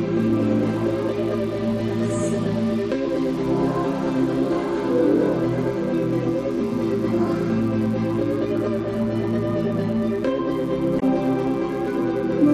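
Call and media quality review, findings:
Mains buzz, whole clip: steady, raspy buzz sitting roughly 25 dB below the programme. Probable source is a dimmer, rectifier or unshielded lead feeding switching spikes into the path twice per 60 Hz cycle. Those spikes produce a dense ladder of 60 Hz harmonics reaching several kHz, hence the rasp rather than a pure hum.

Damaged data in a compressed stream, 10.96–11.03 s: a short glitch of about 70 ms. Corrupted bytes in the encoded stream mean the decoder misreads those frames, drops sync and scans for the next valid frame header before output recovers.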